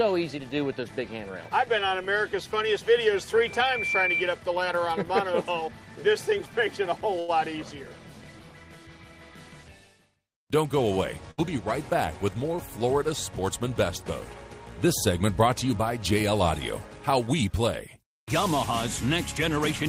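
At 7.19 s a short stall from a late packet runs to 7.30 s. A packet missed its playout time and the jitter buffer drained, so the receiver extended the last sound for 88 ms until the data arrived, then resumed from exactly where it stopped. No audio is lost. Instead, one sound is held too long, and everything after it plays 88 ms later than before, because the playout delay grew by that amount.

From 11.31 to 11.40 s there is a burst of packet loss. Packets failed to arrive in time to be played, and the receiver filled 68 ms by continuing the last sound while lowering its level through the gap. This is heard as a held buzz or a fading hiss, depending on the sound at that point. Playback then picks up later in the material, with 60 ms of audio skipped outright.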